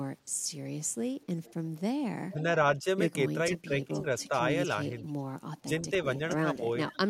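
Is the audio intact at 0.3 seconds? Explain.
Yes, the audio is intact at 0.3 seconds, with no audible fault at that point in the speech.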